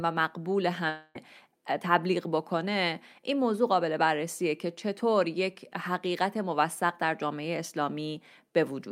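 A long network dropout runs from 0.89 s to 1.17 s: the speech gives way to a buzzy continuation of the last sound that fades across about 256 ms, with no silence, then resumes about 260 ms further on, likely because packets stopped arriving and the receiver filled the gap.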